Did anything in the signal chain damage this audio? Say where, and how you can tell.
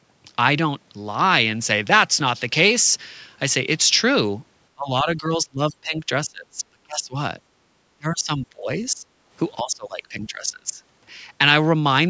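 Yes. The call's echo-cancelling stage is the likely cause. The speech sinks by about 20 to 30 dB at 4.74–6.09, 6.26–7.15, 7.98–9.07 and 9.62–10.82 s, which sounds like speech suppressed in double talk. These are graded dips that recover, not the hard, clean gaps of packet loss.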